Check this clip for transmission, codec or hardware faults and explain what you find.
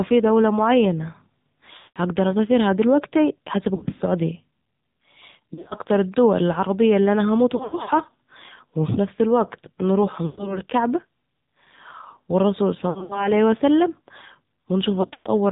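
The clip has two faults: AMR narrowband mobile codec coloration across the whole recording, and repeated lost AMR speech frames.

AMR narrowband mobile codec (AMR-NB): from start to end, the speech has no content above 4 kHz. It sounds buzzy and synthetic, with plainly audible coding damage. The encoder represents the voice with a vocal-tract filter and a sparse pulse excitation at 8 kHz sampling. The degree of roughness fits a low mode around 7.4 kbps, where few bits are available for the excitation.

Lost AMR speech frames occur at seven points: 1.78–1.99 s, 3.76–4.02 s, 5.54–5.74 s (just before "الدول العربية اللي أنا"), 7.56–7.91 s (right after "العربية اللي أنا هموت"), 10.26–10.59 s (after "وفي نفس الوقت نروح"), 12.90–13.30 s, and 15.02–15.29 s. Each time, the decoder repeats the last good pitch and filter settings while reducing the gain. The result is a smeared, warbling stretch that fades out. 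At 1.78 s and 15.02 s the gaps are long enough, about 120–180 ms, for the sound to sag almost to silence. The events at 3.76 s, 5.54 s, 7.56 s and 12.90 s are scattered dropouts that flutter. After each gap, the speech returns weak or rough for a moment.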